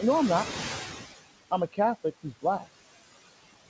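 From start to finish, noise suppressor artifacts pump the room noise: between phrases it sinks by about 16 dB, then swells back under the speech. Unlike a noise gate, it never drops to silence, and the room noise sits about 13 dB below the speech. Nothing is heard above 8 kHz, which fits a G.722 call codec.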